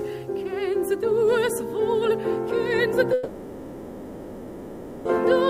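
At 3.13 s the sound breaks off and, until 5.08 s, is replaced by a continuation of the last moment that smears into a fading buzz or hiss. This is a long network dropout, likely caused by incoming audio stopping for almost 2 s, with the receiver filling the whole 1.92 s gap with concealment rather than falling silent. It differs from a stall or buffering pause because the audio resumes further on, skipping the lost 1.92 s instead of picking up where it stopped.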